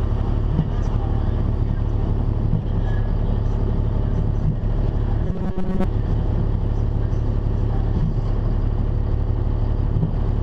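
The clip is an audio recording with one fault. From 5.27 to 5.84 s the sound turns into a rigid, metallic buzz. This is robotic sound from repeated short buffers. The buzz sits at 188 Hz, a fixed pitch that fits a repeated slice about 5.3 ms long. The likely cause is audio arriving too seldom, so the player loops its last short buffer to fill the gap. Roughly 70% of that stretch is repeated material, not new audio.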